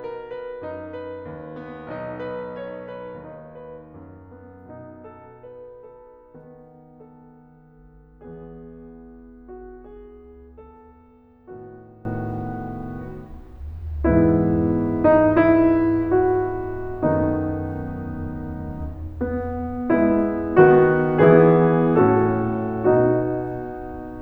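Music whose first 12.05 s collapse by about 22 dB in mono, faint, likely from one channel inverted; the waveform shows near-cancelled, low-amplitude content, and the spectrogram loses its centred energy until 12.05 s.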